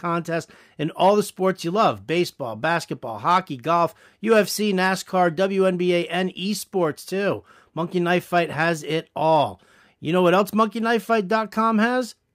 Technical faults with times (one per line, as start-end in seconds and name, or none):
none